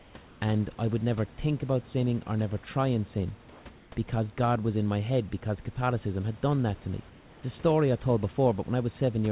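Speech, heard through a narrowband call path with nothing above 4 kHz. Comfort noise in place of the background appears four times: 0.00 to 0.14 s, 0.26 to 0.41 s, 3.50 to 3.65 s and 3.77 to 3.92 s. In each gap the room background gives way to a smooth, featureless hiss. That hiss sits about 4 and 2 dB lower, then about 1 dB higher, then about 1 dB lower, against background roughly 27 dB below the loudest speech. The likely cause is discontinuous transmission, with the receiver synthesizing noise during pauses.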